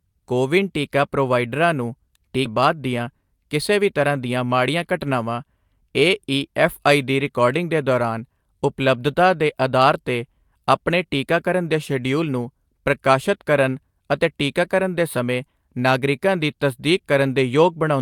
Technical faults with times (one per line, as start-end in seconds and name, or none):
2.45-2.47 skip ahead
2.55-4.93 jitter buffer speed-up